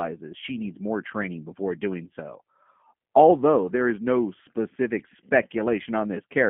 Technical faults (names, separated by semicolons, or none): G.729 codec; VoIP packet loss concealed by the speech codec